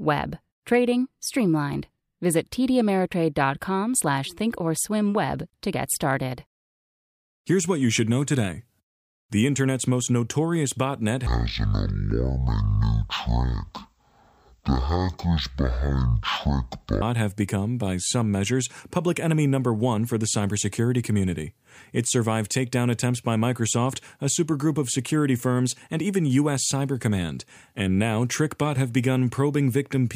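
From 11.27 to 17.02 s, after "internet's most notorious botnet" and before "have become by some", stereo is read as mono: interleaved left and right samples are taken as one channel. The speech plays at half speed, an octave low, with a faint mirrored copy in the upper spectrum.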